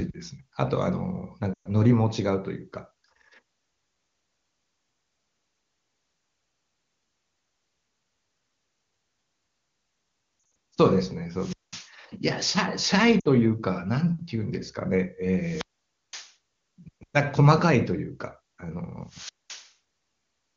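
At 1.53 s there's a bout of lost AMR speech frames: about 120 ms failed, so the decoder stretched the last good sound and let it fade before recovering. Around 10.39 to 10.55 s the losses are scattered over 160 ms, with the longest gap 60 ms, giving a warbly stutter. From 11.33 to 11.93 s a wireless microphone squelch dropout kicks in: static swells as the radio link fades, the receiver mutes for about 200 ms, then speech returns. Another 60 ms frame loss at 13.20 s gives a short smeared dip. The squelch dropout returns at 15.38 to 16.35 s with a longer mute of about 520 ms, and again at 19.05 to 19.74 s with roughly 210 ms of near silence. Throughout, the wideband AMR coding shows at most faint artefacts of its own.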